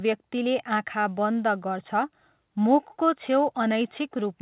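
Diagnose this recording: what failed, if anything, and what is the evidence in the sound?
Nothing failed: the speech arrives over a working WebRTC call path, a G.711 mu-law link at 64 kbps with nothing above 4 kHz, and no stage from capture to playback shows a problem.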